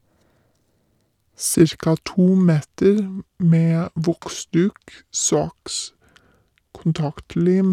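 From 1.55 s to the end, the speech plays as a section at the wrong speed, running at 0.777 times its recorded rate. Pitch drops about four semitones with it, so the voice turns deep and sluggish, likely from playback against a mismatched clock.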